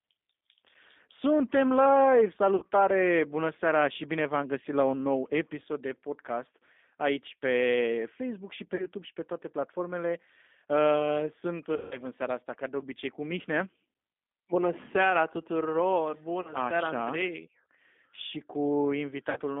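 Throughout, the speech carries G.729 codec coloration. The line is limited to roughly 250 Hz–3.6 kHz, and the analysis-by-synthesis coding, consistent with an 8 kbit/s G.729A coder, leaves a plainly audible rough, slightly synthetic texture.

VoIP packet loss concealed by the speech codec occurs at 2.56–2.66 s, 8.76–8.87 s, 11.76–12.01 s, 16.42–16.54 s and 19.30–19.39 s. About 60, 30, 150, 30 and 60 ms of audio are missing, fitting one to five lost packets. The decoder extrapolates from its last pitch and filter state, producing buzzy, fading stretches. The 150 ms gap is longest.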